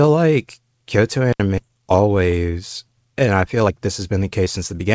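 A short speech recording that has passed through a call path, band-limited at 8 kHz in a way that fits G.722. At 1.33 s the sound cuts out for about 71 ms, until 1.40 s. This is intermittent contact. A loose plug or cable briefly opened the line. The signal drops away with crackle at both edges, and only faint residue remains while the connection is broken. At about 1.58 s there is a skip ahead. Roughly a second of speech is gone. The two sides are spliced almost directly, with no filler. Later audio was already queued, so the receiver jumped forward. The playout delay fell by about a second as a result. Right after, from 1.68 to 2.45 s, the speech runs at about 113% speed. From 3.27 to 4.85 s it runs at about 114%. These are jitter buffer speed-ups. The buffer held more audio than it wanted. To shrink the backlog it trimmed many tiny pitch-period slices in a row. Pitch stays the same, but delivery sounds hurried. 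About a tenth of a second is removed in the first stretch. About a fifth of a second is removed in the second.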